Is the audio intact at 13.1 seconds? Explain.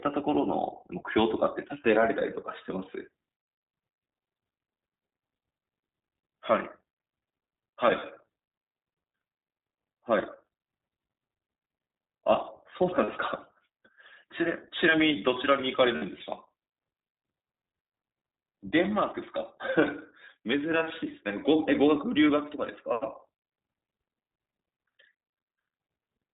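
No. Lost iLBC frames cause a dropout from 13.04 to 13.10 s, a 40 ms gap that fits two missing 20 ms frames. The decoder fills the hole by repeating the last pitch cycle blended with noise, so it sounds like a brief held, buzzy vowel. Each iLBC frame is coded independently, so the speech recovers almost immediately afterwards. The surrounding audio is also carried by the iLBC codec, which removes everything above 4 kHz and gives the speech a plainly audible rough, synthetic edge.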